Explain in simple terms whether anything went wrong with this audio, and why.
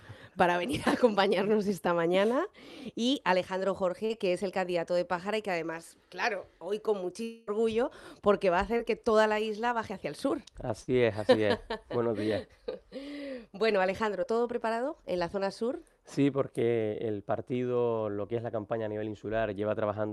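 A few things did go wrong, all from audio getting lost on its way across the network.

Short concealed packet loss happens three times: 4.05 to 4.11 s, 8.77 to 8.81 s, and 14.23 to 14.26 s. Each time a tiny slice, 20 to 40 ms, never arrived, and the receiver patched it by stretching the sound just before. You get a quick smear or wobble.

At 7.23 to 7.49 s there's a longer hole, about a quarter of a second, where the previous sound is held and carried on the whole way through, with no silence, before the audio picks up further along. That's likely a long network dropout, with the receiver filling the entire gap itself.

Then at 10.81 to 10.89 s comes a burst of packet loss: roughly 60 ms in a row went missing. The receiver kept the last sound going and faded it, so it sounds like a brief held buzz or hiss before the audio jumps ahead.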